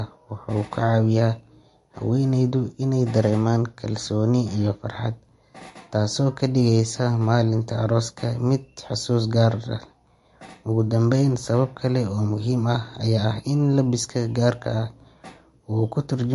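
Throughout the speech, plainly audible MP3 compression damage is heard. Nothing remains above 11.3 kHz, and sibilants sound watery and chirpy. A low bitrate near 48 kbps is the likely cause.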